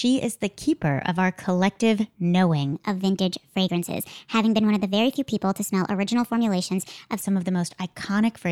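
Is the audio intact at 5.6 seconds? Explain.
No, a section at the wrong speed runs from 2.73 to 7.22 s, likely from a clock mismatch: playback runs 1.18 times fast, raising pitch about three semitones and hurrying the speech.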